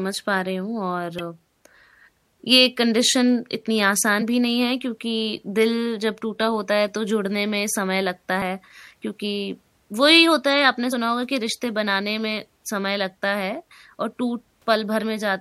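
Damaged data in a compressed stream at 1.19 s, 4.21 to 4.23 s and 10.92 s: corrupted frames make the decoder lose sync, producing brief chirps or blips in the speech.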